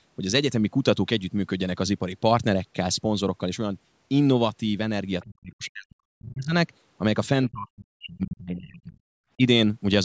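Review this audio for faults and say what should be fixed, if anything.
Speech suppressed in double talk occurs from 5.23 to 6.54 s, from 7.49 to 9.08 s, and briefly from 9.37 to 9.44 s. The speech sinks by up to about 40 dB in the first two spans, and about 10 dB in the last. The likely cause is an echo canceller that could not tell the talker from loudspeaker echo while both sides spoke. It turned both down. Better double-talk detection in the echo canceller would prevent this.

The other side's voice leaking through appears from 7.45 to 7.49 s. It is a faint scrap, about 35 dB below the speech, just before the second suppressed span. It is likely residual loudspeaker echo that the canceller left in the microphone signal. Stronger residual echo suppression, or a headset, would prevent it.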